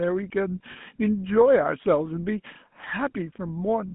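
A short speech clip carries the audible marks of the GSM full-rate codec throughout. The voice has a buzzy, gravelly roughness. The codec models the vocal tract and drives it with a sparse, regularly spaced pulse excitation, and that coarse excitation is what makes the grain. The band is narrow, running from about 150 Hz to 3.5 kHz, so the top of the sound is missing. The damage is plainly audible and fits a 13 kbps stream. At 0.72 to 0.77 s, lost GSM frames cause a brief fault. The decoder repeats the last good frame rather than leaving a gap. This holds the sound as a rough, metallic ring for about 40 ms. That length fits two lost frames. The dropout is too short to fade to silence, so it registers as a brief ringing smear.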